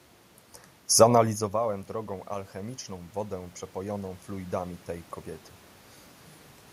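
From 1.52 s to 4.59 s the automatic gain rising fault is audible. The speech level at the microphone had dropped by about 19 dB, after the talker moved back around one second in, and the gain control slowly pushed its gain up by about 5 dB to compensate. The voice and the room noise swell together over those three seconds. On a waveform the envelope, noise floor included, widens steadily; a spectrogram brightens evenly across all frequencies.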